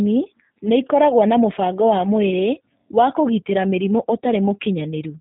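From start to finish the speech carries G.729 codec damage, plainly audible as a rough, slightly synthetic edge, which fits an 8 kbit/s G.729A stream. The codec discards the waveform and rebuilds each 10 ms frame from a vocal tract filter, a pitch predictor and a few coded pulses. On a spectrogram, energy stops sharply at about 3.8 kHz with nothing above, while harmonics look smeared and blotchy. The waveform keeps its outline but loses fine detail.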